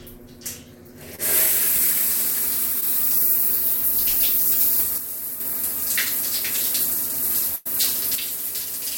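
At 1.15 to 1.20 s and again at 2.80 to 2.83 s, the sound smears briefly into a wobble. This is short concealed packet loss: about 20 ms went missing each time, and the receiver bridged it by extending what came just before.

From 4.98 to 5.40 s, the level abruptly drops by about 6 dB and then returns. This is most likely one channel dropping out before the mono sum, leaving only half of the shared content.

From 7.55 to 7.67 s, the sound stalls into a held, fading tail and then jumps ahead. This is a burst of packet loss: about 100 ms never arrived, was replaced by roughly 0.1 s of decaying continuation, and the audio in between is gone.

From 8.15 s to the end, the same drop of about 6 dB returns, likely as one channel drops out again.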